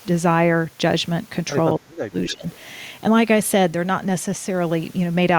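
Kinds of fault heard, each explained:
Speech suppressed in double talk, 1.75 to 2.44 s: the speech sinks sharply in pieces over about half a second, at its deepest about 30 dB down. The likely cause is an echo canceller facing both sides talking at once. Unable to tell the near talker apart from the loudspeaker echo it was trying to remove, it pulled the level down on both, taking the wanted speech with it.
Echo leak, 2.27 to 2.32 s and 2.51 to 2.57 s: two brief scraps of a delayed copy of the speech come back 277 ms late, the first about 15 dB below the direct speech and the second fainter, about 30 dB below. This likely comes from a far-end loudspeaker whose echo canceller did not fully clear what its microphone picked up, so short fragments slipped through and were returned.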